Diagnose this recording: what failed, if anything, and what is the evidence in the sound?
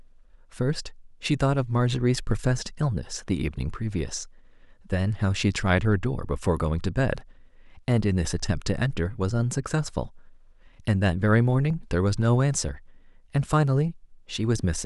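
At 11.70 s the speech jumps slightly forward with no silent gap, unlike a dropout. The likely cause is a dropped buffer (overrun) in the driver or buffer stage: a few milliseconds of samples were overwritten before collection, so the two sides were joined directly.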